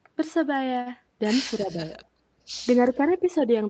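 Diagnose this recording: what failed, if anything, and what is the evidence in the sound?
Short stall from a late packet, network and jitter-buffer stage: from 0.81 to 0.88 s the sound is held for about 45 ms, with a slight buzz or dip. A packet arrived late, the buffer ran dry, and the receiver stretched the last sound before resuming where it left off.

Speech suppressed in double talk, call processing stage: between 1.58 and 1.97 s, and again from 2.79 to 3.28 s, the speech dips by around 10 dB. This is likely the echo canceller ducking its own talker when it could not separate that talker from the far side.

Echo leak, call processing at the loudspeaker end: from 3.11 to 3.29 s a faint delayed copy of the speech appears, roughly 30 dB down and trailing by 295 ms. This is likely residual loudspeaker pickup that the far end's echo canceller failed to remove.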